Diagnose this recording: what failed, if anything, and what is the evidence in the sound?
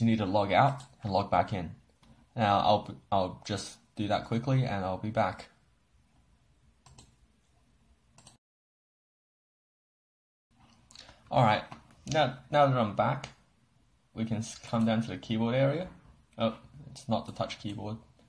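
Nothing in the recording points to a failure at any stage of the chain. The audio gives no evidence of a fault that would need tracing to wiring, conversion, buffering, processing, transmission, storage or playback.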